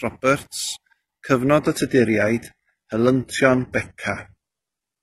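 Speech, with an adaptive stream at a lower bitrate taking over at 1.60 s and running to the end. The switch is sudden and gapless: treble thins, consistent with a drop from a high-rate AAC stream to a low-rate HE-AAC one. A spectrogram shows content abruptly absent above about 11.8 kHz.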